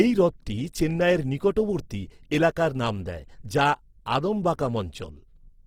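Throughout the speech, Opus compression sounds rough and grainy, likely from a CELT encode near 16 kbps. Spectrograms show noise-filled bands reaching 20.3 kHz.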